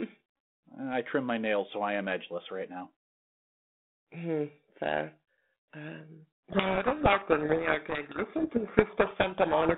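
From 6.50 s to the end of the clip there's a codec payload misread: the two ends disagree on the bit order of the G.726 code words, so the decoder rebuilds nonsense from valid-looking data, and the speech, band-limited by the 32 kbit/s telephone path, gets buried in harsh distortion.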